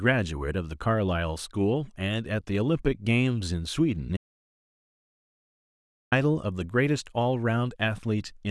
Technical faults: audio dropout to silence

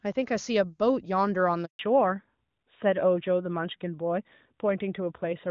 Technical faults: handover gap; fallback to narrowband

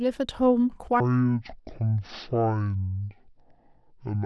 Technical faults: section at the wrong speed

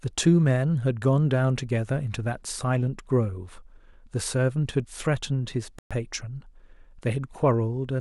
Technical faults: playback stall

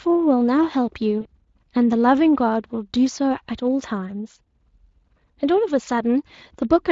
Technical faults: VoIP packet loss concealed by the speech codec

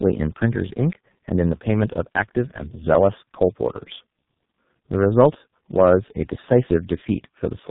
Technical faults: tandem speech coding

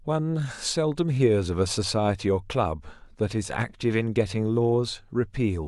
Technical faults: none

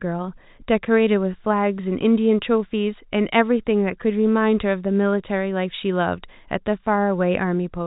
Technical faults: none

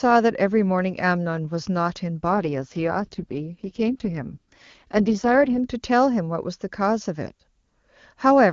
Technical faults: AMR rate drop

